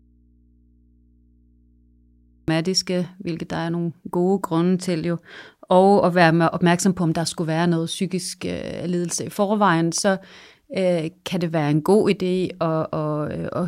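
The signal feed to this speech recording most likely lost its source while the path downstream stayed live, producing an audio dropout to a faint residue that is already under way when the clip begins. For the first 2.48 s the speech is missing and only mains hum from the open input remains, around 35 dB below the normal level. The speech then cuts back in abruptly at 2.48 s, with no fade-in.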